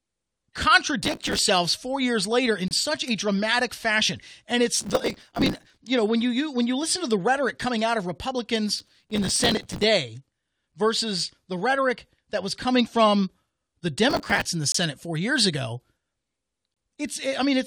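Speech, marred by two kinds of fault. Processor overload crackle appears as four bursts of gritty tearing riding on the voice, at 1.02–1.39 s, 4.76–5.78 s, 8.79–9.84 s and 14.10–14.45 s. Within each burst, dozens of tiny hard-edged fragments repeat stale audio instead of leaving silence. That texture points to buffers of around 5 ms repeatedly missing their deadlines, with the previous buffer's content replayed each time, until the load eases. Separately, there are gaps between stream segments: single clean holes of silence at 2.68–2.71 s (27 ms), 10.72 s (6.1 ms), 14.72–14.75 s (24 ms) and 16.74–16.77 s (23.8 ms). Their placement fits a stream cut into 2-second segments whose time stamps leave a small space at the joins, which the player fills with nothing. What separates them from the crackle is that each is one isolated silent dropout, not a dense run of repeated fragments, and the sound resumes intact on either side, with nothing lost.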